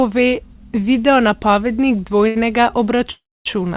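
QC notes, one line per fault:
2.28–2.37 s, short stall from a late packet: One packet reached the receiver late, and the jitter buffer had nothing left to play. To cover the wait, the receiver stretched the sound it had just played for about 72 ms, then resumed exactly where it left off once the packet landed. Nothing is lost, but the sound lingers unnaturally here, with a faint buzzy, slightly dipped quality, and everything after it runs 72 ms later.
3.11–3.47 s, call audio freeze: The sound stops for 342 ms. The likely cause is packets held up in transit that drained the jitter buffer. Briefly the last sound carries on as a decaying buzz, then there is about 260 ms of silence before the audio picks up from the same point. This inserts a gap rather than cutting anything out, so the remainder is delayed by 342 ms. Throughout, the band-limited tone with no content above 4 kHz fits narrowband telephone coding.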